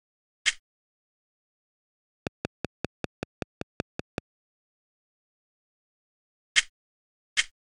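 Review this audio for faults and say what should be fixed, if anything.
There's a train of clicks from 2.27 to 4.19 s: about ten evenly spaced ticks at roughly 5.2 per second, poking well above the sound. The steady pulse is likely interference from nearby gear or a struggling interface. Check grounding, cabling and interface drivers before re-recording.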